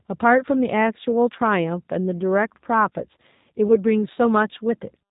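Right from the start the whole clip carries the sound of the G.729 codec. The speech is rebuilt from a vocal tract model plus a pitch predictor and a few pulses, so it comes across slightly rough and synthetic, with nothing above 4 kHz. That damage is plainly audible and fits an 8 kbit/s setting.

At 3.68 s there's a VoIP packet loss concealed by the speech codec, and its effects last until about 3.77 s. It sounds like a single 10 ms frame went missing. The decoder filled the gap by repeating its last pitch and filter at falling gain, so you hear a brief stretched, fading sound. Because each frame builds on the one before, the voice stays a bit weak and off for a short while after the dropout.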